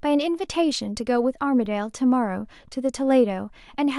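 At 1.65 s a corrupt frame decoded produces a brief glitch in the speech: one damaged compressed frame was played anyway, its misread codes scattering energy to wrong frequencies, peaking around -30 dBFS.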